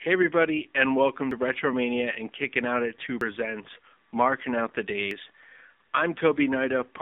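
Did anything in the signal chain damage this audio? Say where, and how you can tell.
Yes, two things. First, the whole clip has been through the AMR narrowband mobile codec, at 7.4 kbps by the sound of it. It's a codec-stage problem: the band sits between 250 Hz and 3.6 kHz with nothing above, and the speech has that buzzy, synthetic edge you get when a vocal-tract model is rebuilding the voice from very few bits per 20 ms frame. The damage is plainly audible.

Second, there's audio missing between chunks, most likely at the driver or buffer stage. You get three abrupt skips at 1.31 s (just after "everybody and welcome"), 3.21 s and 5.11 s, each dropping roughly a tenth of a second, with the two sides butted together and no silence between them. That evenly spaced rhythm fits a capture process working in 2-second chunks and losing a slice each time it hands over.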